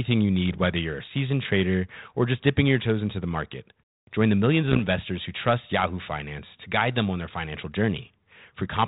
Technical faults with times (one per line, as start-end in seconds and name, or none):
0.49-0.58 bit errors on an ADPCM link
4.68-4.83 bit errors on an ADPCM link